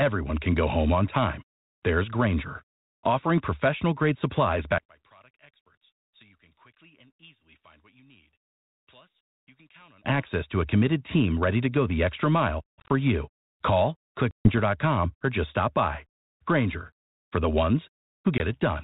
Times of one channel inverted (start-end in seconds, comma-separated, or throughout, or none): 4.78-10.05